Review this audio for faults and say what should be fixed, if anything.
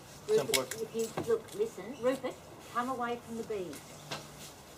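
Nothing stood out on listening, so there is nothing here that needs fixing.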